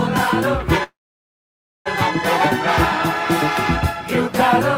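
At 0.83 s the sound stops, trailing into near-silence until 1.88 s, then resumes where it left off: a call audio freeze, likely from delayed packets draining the jitter buffer.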